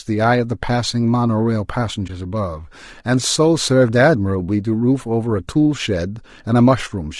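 From start to finish the speech carries plainly audible low-delay AAC compression, most likely AAC-ELD at a rate that points to around 32 kbps. The short transform frames separate the pitch harmonics poorly, so the voice sounds rough and grainy, with noise filling the gaps between harmonics and a thin, somewhat synthetic top band. On a spectrogram the harmonic stripes look smeared and speckled, and the highest region shows patchy, blocky energy instead of clean detail.

At 2.07 to 2.10 s there is AAC frame loss with muting. The decoder zeroed the spectrum for the missing stretch, which sounds like a brief, soft-edged dropout, consistent with one lost frame of about 20 ms. The overlapping windows fade the signal down and back up rather than cutting it. A spectrogram shows a narrow vertical gap across all frequencies, and the waveform shows a short dip tapering smoothly toward silence and recovering.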